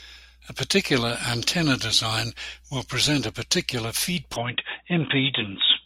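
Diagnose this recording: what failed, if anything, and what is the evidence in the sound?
The failure sits at the capture end, in device selection at the driver level: the input likely switched to a poorer device. At 4.36 s, right after "will present a particular", the sound abruptly turns narrow and dull, with nothing above 3.8 kHz, and stays that way to the end. There is no gap at the switch and no obvious level jump. A faint new noise floor appears, roughly 55 dB below the signal. This is a band-limited microphone path replacing the full-band one.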